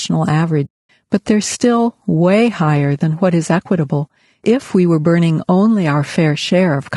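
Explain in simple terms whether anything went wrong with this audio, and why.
Throughout the clip the voice sounds rough and grainy, with a hiss-like fuzz between the tones and a dull or artificial-sounding top end. That is low-delay AAC compression, likely the AAC-ELD codec used in video calls, squeezed hard enough that its damage is clearly audible.

From 0.65 to 0.9 s the sound fades out into a soft-edged gap, about a quarter of a second long, and fades back in just before "but they're still way". That is AAC frame loss with muting: a run of coded audio never arrived, so the decoder filled that stretch with silence.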